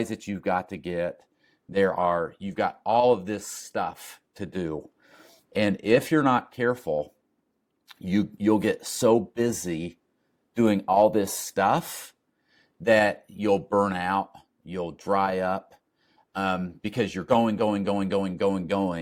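At 11.49 s, right after "busy doing all this", compressed frames are skipped: roughly three 10 ms frames, about 30 ms of audio, never get decoded, so the speech jumps ahead.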